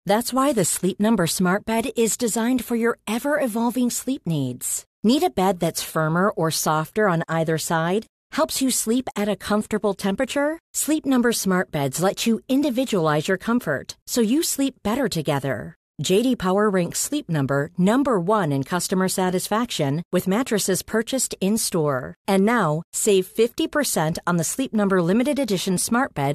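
It's a speech recording, and there's nothing technically wrong to point to anywhere in it.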